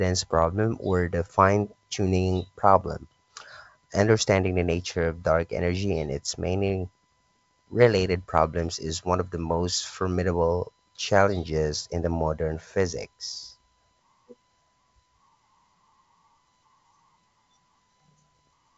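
No technical faults occur anywhere in the clip; the G.722 wideband telephone coding at 64 kbit/s works as intended, with content reaching up to about 7.7 kHz and nothing above that.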